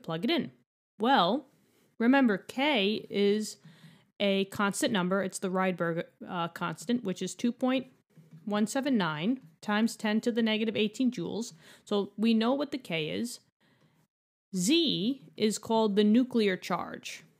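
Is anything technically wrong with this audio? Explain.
No, nothing is technically wrong with this audio.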